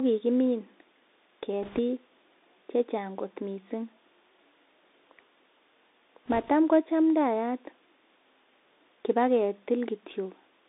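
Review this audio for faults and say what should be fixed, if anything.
The whole clip carries the sound of a Bluetooth CVSD headset codec. Nothing gets past roughly 200 Hz to 3.7 kHz, s sounds go scratchy, and a grainy hiss sits under the speech. Use a wideband headset profile or a wired mic.

There are bit errors on the Bluetooth voice link from 1.63 to 1.80 s and from 6.26 to 6.49 s. Flipped bits of around a couple of percent add a rushing crackle rather than clicks. Keep the headset close and away from radio interference.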